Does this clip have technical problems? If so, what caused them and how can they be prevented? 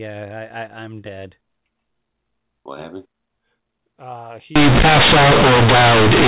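Yes. From 4.56 s to the end at 6.27 s, the speech suddenly turns into very loud, harsh, buzzy distortion, with heavy noise filling the gaps. The cause is companded audio read as linear: A-law telephone bytes, up to then decoded properly at 8 kHz, are being played as plain 8-bit samples without expansion, so every sign change throws the waveform across half its range. Labelling the stream format and decoding A-law explicitly prevents this.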